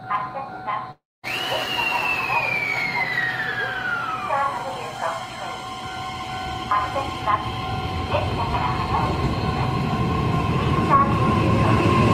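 The incoming stream was likely interrupted by a long network dropout from 0.91 s to 1.25 s, and 320 ms of audio never arrived. The receiver stretched the last sound into a fading buzz or hiss, then left 230 ms of silence before the audio resumed with that stretch missing.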